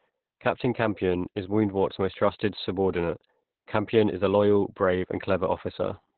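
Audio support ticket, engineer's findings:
Opus voice compression, throughout: speech muffled, hoarse, slightly robotic, nothing above 4.2 kHz. Fits narrowband SILK near 8 kbps coarsely coding excitation, discarding upper band.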